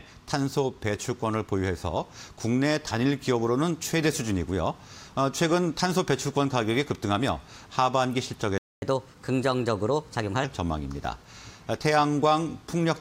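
A playback stall at 8.58 s cuts the sound to silence for about 240 ms, likely because the player ran short of data or its thread was blocked. Catch-up at higher speed follows from 8.82 to 10.44 s: the backlog plays 1.15 times faster, raising pitch about two semitones before settling back.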